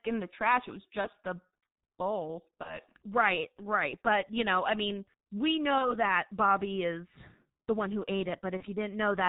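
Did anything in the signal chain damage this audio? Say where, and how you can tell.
Yes. At the codec stage, the whole clip carries heavy G.723.1 codec damage at about 6.3 kbit/s. The speech is muffled, with nothing above 4 kHz. It sounds hoarse and the consonants are blurred. The 30 ms frames and slow updates of the voice model blur the consonants.

At the network stage, VoIP packet loss concealed by the speech codec hits four times. The first is at 1.01–1.08 s, after "the trash it was". The others are at 2.63–2.79 s, after "the bowl", at 5.78–5.96 s, before "that bobby is the", and at 8.57–8.63 s. Each loses one 30 ms frame. The decoder extrapolates from the last pitch and filter, stretching the sound into a fading buzzy tone or coloured noise. The sound stays weakened briefly afterwards.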